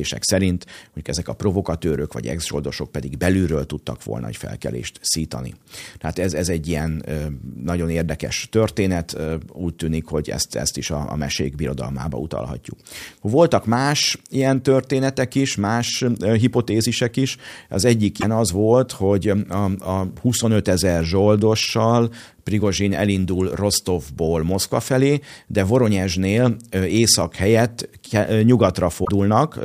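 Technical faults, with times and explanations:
18.20–18.24 s and 29.04–29.09 s: broken MP3 bit reservoir, where the audio jumps ahead with a brief glitch, likely from missing frames leaving the next frames to decode borrowed bits wrongly.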